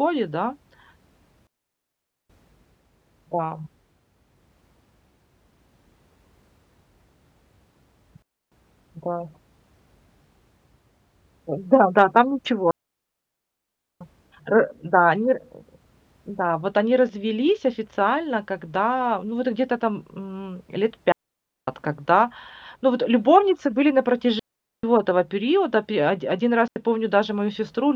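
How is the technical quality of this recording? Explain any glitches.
The recording has repeated digital wireless dropouts. The link loses too much data, so the receiver mutes. Each dropout leaves a clean, near-silent hole with no noise burst. They occur at 1.47–2.30 s (0.83 s), 8.22–8.52 s (0.29 s), 12.71–14.01 s (1.3 s, before "э да они ра"), 21.12–21.68 s (0.56 s), 24.39–24.83 s (0.44 s, between "вот любовницы были на" and "этого периода"), and 26.68–26.76 s (84 ms, after "оди один").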